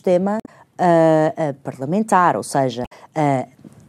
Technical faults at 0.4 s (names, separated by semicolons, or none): damaged data in a compressed stream